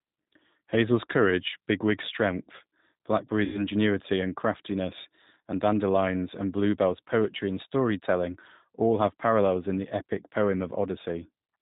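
G.729 coding runs throughout. The thin, slightly rough and synthetic character points to the 8 kbit/s G.729A variant. It rebuilds speech from a vocal tract filter, a pitch predictor and sparse pulses in each 10 ms frame, with nothing above 4 kHz, and that damage is plainly audible.

VoIP packet loss concealed by the speech codec occurs from 3.44 to 3.64 s. About 100 ms of audio went missing, which fits five lost 20 ms packets. The decoder stretched its last pitch and filter into a fading buzzy tone or coloured noise, and the speech stays weak or distorted briefly after packets resume.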